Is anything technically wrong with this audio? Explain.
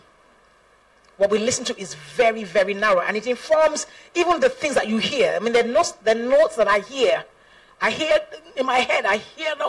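No, nothing is technically wrong with this audio.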